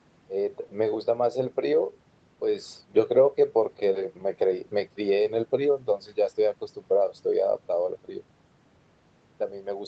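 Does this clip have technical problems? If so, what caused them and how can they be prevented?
No, there's nothing wrong here; it's speech that came through a normal call setup, with the top end stopping around 8 kHz as you'd expect from the call codec, so there's nothing to fix or prevent.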